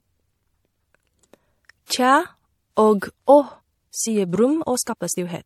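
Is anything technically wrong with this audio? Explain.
Yes, there are two faults. The first runs through the whole clip. The second affects the last part.

Throughout the clip there is transcoding between lossy codecs. The speech was likely encoded twice. The first encode sounds like a low-rate MP3, around 48 kbit/s. It was then re-encoded as WMA, which fits about 96 kbit/s. The second encoder spends its bits on the first one's damage and adds its own. Both sets of artefacts are heard together. The lower of the two encoders' cut-offs is what remains.

From 3.26 s to the end there is a time-stretched section. Software has squeezed this part, probably to fit a length. It runs 1.36 times faster. Pitch is kept by dropping short pieces of audio. That is the likely cause of what we hear. The pace jumps abruptly at 3.26 s while the pitch stays the same. The speech then sounds rushed.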